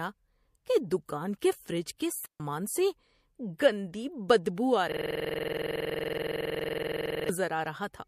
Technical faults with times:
2.26-2.40 digital wireless dropout
4.55-4.58 pre-echo
4.92-7.29 system hang loop

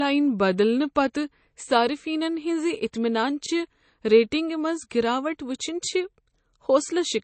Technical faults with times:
0.00-7.23 low-bitrate audio saved at a high bitrate

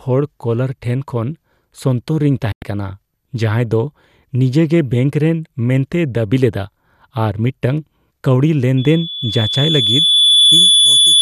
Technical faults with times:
2.52-2.62 digital broadcast dropout
8.77-11.21 loudspeaker feedback squeal

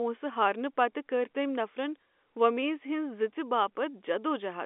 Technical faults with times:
none

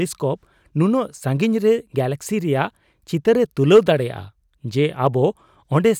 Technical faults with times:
3.73-3.79 hard clipping

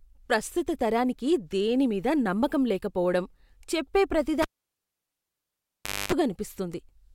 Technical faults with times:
4.42-6.12 cable pulled and plugged in

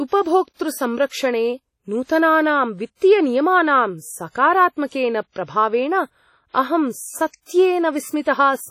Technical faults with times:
0.00-8.70 WMA compression

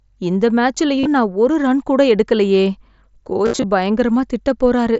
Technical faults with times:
0.99-1.06 concealed Bluetooth headset packet loss
3.45-3.64 concealed Bluetooth headset packet loss

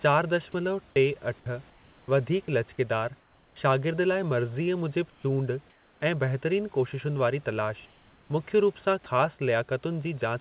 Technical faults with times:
0.52-0.54 sound dropped by the voice detector
1.40-2.48 sound chopped by the voice detector
3.20-3.56 comfort noise in place of the background
5.10-6.02 comfort noise in place of the background
6.00 onset clipped by the voice detector
9.04-9.06 sound dropped by the voice detector

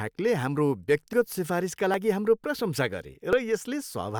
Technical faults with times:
1.13 dropped buffer (overrun)
1.94 dropped buffer (overrun)
3.33 dropped buffer (overrun)

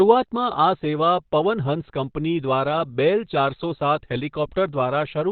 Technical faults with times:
0.00-5.31 Opus compression

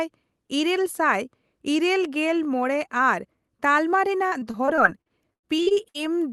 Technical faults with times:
4.27-5.96 repeated packet loss (robotic sound)

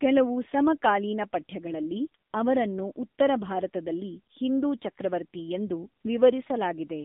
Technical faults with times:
0.00-7.04 AMR narrowband mobile codec

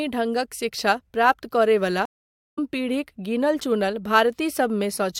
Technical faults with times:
2.05-2.58 stream reconnect

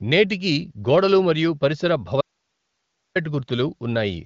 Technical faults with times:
2.21-3.15 audio dropout to a faint residue

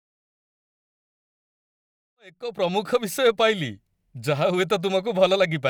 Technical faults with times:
none

